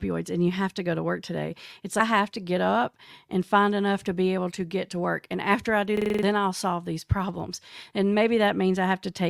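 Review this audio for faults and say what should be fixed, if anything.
A system hang loop occurs from 5.97 to 6.23 s, between "after I do" and "then I'll solve these". One 43 ms slice of audio repeats six times, giving a stutter at about 23 Hz. The host stalled while the sound hardware kept replaying the same ring buffer, which fits a 2048-sample buffer. About a third of a second of real speech is lost. To prevent it, keep the audio thread from being blocked.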